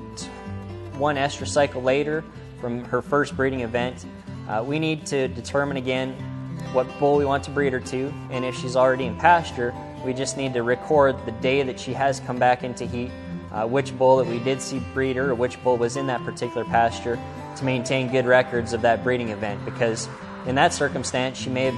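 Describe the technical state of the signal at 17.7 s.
At 17.7 s codec artefacts are more obvious than before, with more compression smearing. The change arrived abruptly at 16.78 s with no gap, and it lasts to the end at 21.77 s. This is an adaptive stream at a lower bitrate. The player has dropped to a leaner version of the stream, which points to a switch from about 128 kbit/s MP3 down to 64 kbit/s. With fewer bits available, the encoder discards more high-frequency detail.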